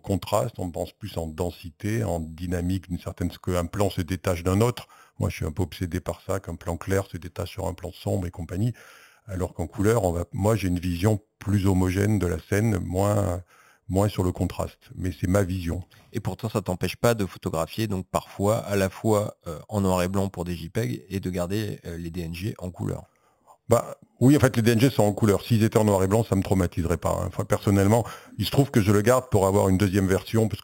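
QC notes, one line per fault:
Throughout: imaging from sample-and-hold upsampling. The speech was raised from 8 kHz to 44.1 kHz by repeating each sample with no smoothing, so mirrored copies sit above the original band, the first spanning 4 to 8 kHz at about 19 dB below the signal. Unlike steady hiss, this metallic fizz rises and falls with the voice, and its lowest copy moves opposite to the pitch.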